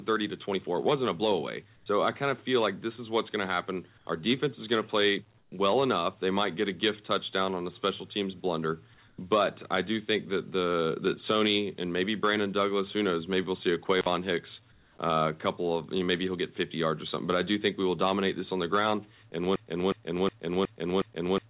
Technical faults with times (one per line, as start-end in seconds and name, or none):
1.76-1.86 comfort noise in place of the background
5.38-5.52 comfort noise in place of the background
9.08-9.18 comfort noise in place of the background
13.98-14.06 intermittent contact
14.72-14.98 comfort noise in place of the background
19.56-21.50 broken-record loop